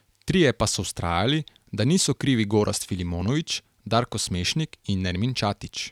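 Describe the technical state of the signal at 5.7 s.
At 5.7 s the signal is intact, with no dropout, distortion, glitch or other technical fault audible at that point.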